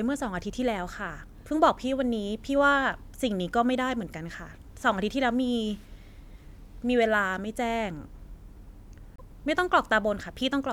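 At 9.16 s the speech skips forward, and a short garbled stretch lasts until 9.21 s. This is likely a broken MP3 bit reservoir. Frames were lost. The next frames then read borrowed bytes from the wrong place. The 56 ms span fits about two 26.1 ms frames.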